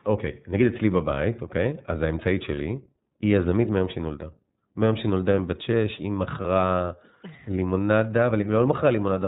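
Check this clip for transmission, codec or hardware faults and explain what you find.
The clip has two faults: iLBC codec coloration throughout and two brief lost iLBC frames.

iLBC codec, throughout the whole clip: the sound is confined to the narrowband range, with nothing above 4 kHz. Each block is coded on its own, and the block rhythm fits the 30 ms frame mode at about 13.3 kbps. The excitation is coarsely modelled at that rate, which gives the speech a plainly audible roughness and a slightly synthetic, buzzy edge with a muffled top end.

Lost iLBC frames, at 2.55–2.58 s and 6.42–6.46 s: each gap is about 30 ms, which fits a single dropped frame. When a packet fails to arrive, the decoder conceals it by repeating the last pitch cycle with added noise. Each dropout therefore sounds like a momentarily held, faintly buzzy, breathy vowel rather than silence. Because iLBC frames don't depend on their predecessors, the speech snaps back to normal immediately after each gap.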